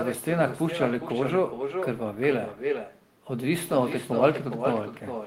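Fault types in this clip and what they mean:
echo with no canceller: The far end is playing this speech over a loudspeaker, its microphone is picking that playback up, and nothing subtracts it before it is sent back. Across the whole clip every phrase returns a little under half a second later, at about 7 dB below the original. It sounds thinner than the direct speech, because it has passed through a loudspeaker.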